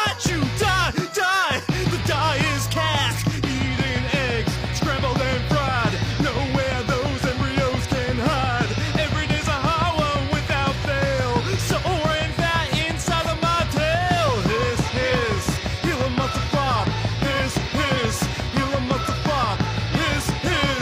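Damaged data in a compressed stream hits at 3.07 to 3.13 s and 17.93 to 17.97 s. Corrupted frames make the decoder lose sync, giving brief glitches heard as a chirp, squawk, click or short hole.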